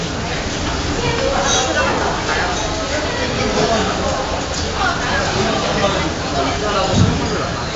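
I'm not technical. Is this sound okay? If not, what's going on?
No. The whole clip has been through 4-bit ADPCM compression, an old space-saving method. It stores each moment as a small, rough step from a guess, so it keeps making small errors. Those errors sound like a gritty hiss riding on every loud part, and sudden hits come out harsh. The damage here is heavy. Nothing above about 7.8 kHz survives, which suggests a low sample rate and makes it sound dull.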